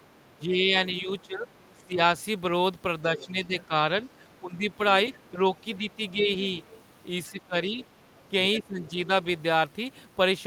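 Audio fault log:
0.2–9.09 s, speech suppressed in double talk. The speech dips in four stretches: 0.2–2.01 s, 3.16–3.74 s, 4.28–6.29 s and 7.31–9.09 s. The deepest drops are about 15, 10, 10 and 15 dB. Within each stretch, the level falls for roughly a second, a third of a second, under a second and under a second. The likely cause is an echo canceller that could not tell the near talker from loudspeaker echo while both spoke. It turned both down.
1.11–6.83 s, other side's voice leaking through. A faint second voice sits under the speech at 1.11–1.82 s, 3.17–3.66 s, 5.14–5.18 s and 5.94–6.83 s. It is about 30, 20, 30 and 25 dB below the speech. The 5.14 s scrap is a brief blip. The other stretches run longer. This is likely the far end's audio playing from a loudspeaker and reaching the microphone. The echo canceller did not remove all of it.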